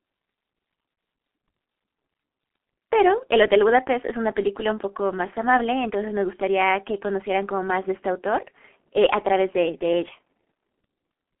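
Throughout, the speech carries heavy G.723.1 codec damage. Nothing reaches above 3.8 kHz, leaving it muffled. Slow 30 ms frame updates, consistent with about 6.3 kbit/s, leave it hoarse and smeared.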